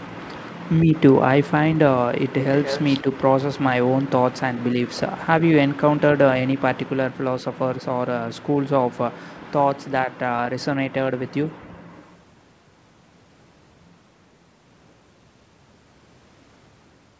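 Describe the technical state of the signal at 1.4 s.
At 1.4 s the speech is intact, carried cleanly through the call microphone processing and G.722 wideband telephone coding with nothing present above 8 kHz.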